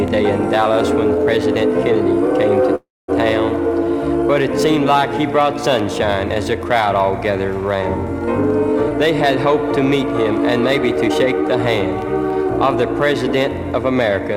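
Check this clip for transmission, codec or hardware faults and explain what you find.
Two transmission faults are audible.

From 2.75 to 3.10 s there is a call audio freeze. The last sound is stretched into a fading buzz that drops to silence for about 220 ms, then playback resumes with nothing lost, roughly 0.33 s late. The likely cause is delayed packets draining the jitter buffer.

At 8.89 to 8.92 s there is a skip ahead. Around 70 ms of audio is missing, and the two sides are joined by only a 12 ms fill. This is a dropped stretch, in transit or from jitter-buffer overflow, which shortens the delay by about that amount.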